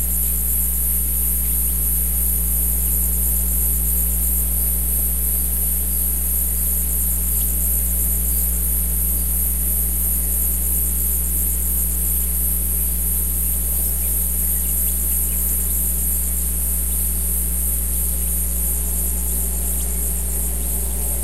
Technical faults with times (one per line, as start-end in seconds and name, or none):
0.00-21.23 mains hum